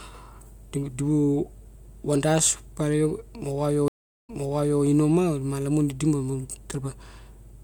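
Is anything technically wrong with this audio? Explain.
Yes. A stream reconnect occurs between 3.88 and 4.82 s: the connection drops, leaving a 390 ms silence, then a fresh decoder restarts mid-stream from resent data, so the speech resumes 0.55 s earlier and a short stretch is heard twice.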